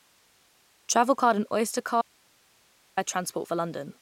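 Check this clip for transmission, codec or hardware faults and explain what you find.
One fault is present. From 2.02 to 2.97 s the speech cuts out abruptly, leaving only faint hiss around 35 dB down: an audio dropout to a faint residue, likely a signal loss while the path stayed live.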